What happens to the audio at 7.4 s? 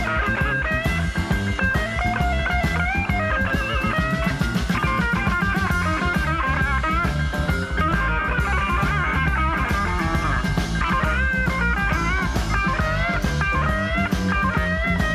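Nothing goes wrong at 7.4 s; the audio runs through that moment intact, with no dropout, click or other fault.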